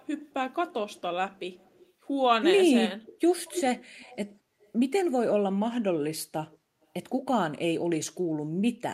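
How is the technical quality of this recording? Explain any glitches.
The speech has an echo leak in five stretches: 0–1.01 s, 1.34–1.87 s, 3.03–4.17 s, 4.6–4.72 s and 6.51–6.86 s. A delayed copy of the voice trails 228 ms behind. It is faint, around 30 to 35 dB down, except at 3.03–4.17 s, where it rises to roughly 10 dB below the voice. This is likely sound that a loudspeaker-side echo canceller failed to remove and sent back.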